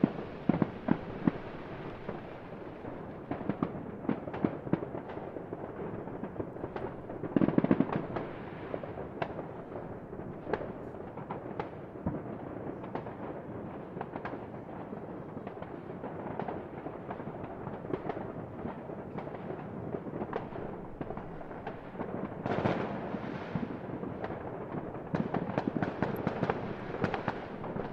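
Near the end of this audio, at 26.16 s, there's a single short snap riding on top of the sound, an electrical switching spike. It's fairly quiet, and it's most likely a nearby switch, motor or static discharge arcing briefly and getting picked up by the audio line.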